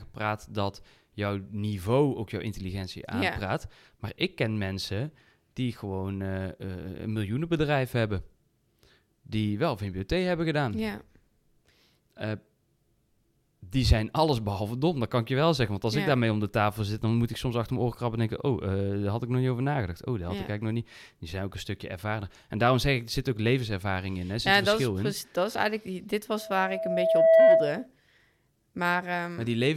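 From 26.38 s to 27.87 s a steady tone at 653 Hz rises out of the speech, swelling over roughly a second until it stands well above the voice, about 15 dB louder, before it ends. This is loudspeaker feedback squeal: the microphone was hearing its own loudspeaker, and at 653 Hz the round trip through the system gained more than it lost, so that one frequency kept reinforcing itself.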